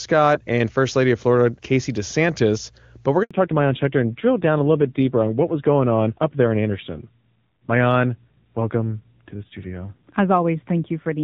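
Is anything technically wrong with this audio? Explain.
Yes, there are two faults.

At 3.23 s, just after "but we're", there is a handover gap. The call switched networks and no speech frames arrived during the change. The sound cuts out for 80 ms until the new link starts. Whatever was said then is lost.

From 3.31 s to the end there is a fallback to narrowband. The audio comes through the high-rate HD Voice codec before this point. After the handover it is carried by a lower-rate narrowband codec, likely around 7.4 kbit/s. Nothing above 4 kHz remains, so the speech sounds duller and rougher.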